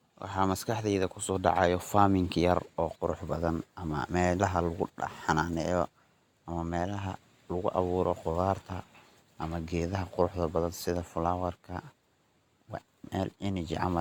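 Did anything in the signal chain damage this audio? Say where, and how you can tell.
No, nothing along the chain has left a mark on this speech that I can hear, so there's no stage to point a finger at.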